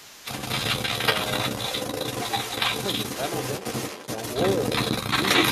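Other side's voice leaking through runs from 0.0 s to the end of the clip: a second voice runs alongside the talker throughout, roughly 5 dB louder than the speech itself, so it competes rather than lurking in the background. The likely cause is the talker's device playing the far end on a loudspeaker while its echo canceller fails to strip that playback out of the microphone signal, leaving the remote voice to pass back down the line.

Speech suppressed in double talk follows at 0.1 to 0.23 s, with the affected stretch lasting around 150 ms. The talker's voice ducks sharply, falling by roughly 15 dB at its deepest, so the sound seems to drop away briefly. This is likely the echo canceller reacting to both sides speaking at once: unable to tell the local talker from the loudspeaker echo, it turns the whole microphone signal down, taking the wanted speech with it.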